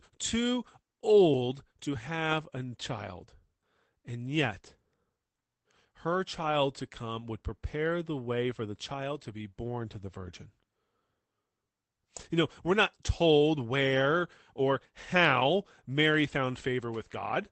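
No technical faults occur at any point in this speech clip, which comes through a normal call path.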